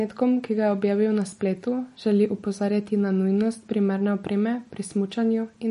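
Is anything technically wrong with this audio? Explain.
Yes, throughout this speech the audio was likely squeezed by MP3 compression at a low bitrate, around 40 kbps. The encoder dropped everything above 10.6 kHz, and weak lines flicker between frames, so the speech sounds plainly watery and dull.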